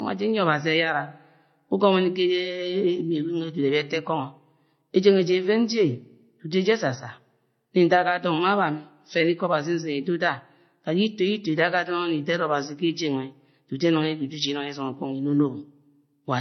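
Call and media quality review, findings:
Speech band-limited throughout, nothing above 6.1 kHz; two distinct sets of coding artefacts audible together. Likely transcoding between lossy codecs, consistent with a 32 kbit/s MP3 re-encoded to 40 kbit/s HE-AAC. Second encoder spends bits on first's artefacts; lowest cut-off persists.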